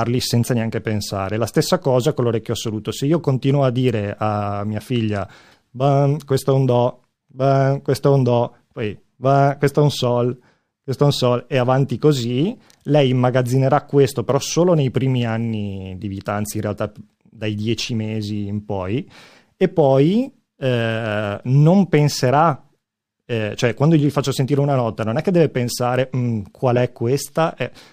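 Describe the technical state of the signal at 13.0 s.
At 13.0 s the speech has a dulled top end with a faint metallic shimmer riding on sibilants. This is imaging from linear upsampling, present throughout the clip. The rate was raised by straight-line interpolation, which fits a step from 22 kHz to 44.1 kHz. That weak filter softens the highest speech frequencies and leaves a mirrored copy of the spectrum between 11.03 kHz and 22.05 kHz, roughly 35 dB below the signal.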